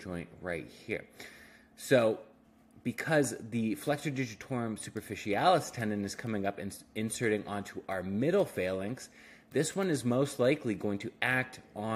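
No technical faults can be heard anywhere in this recording.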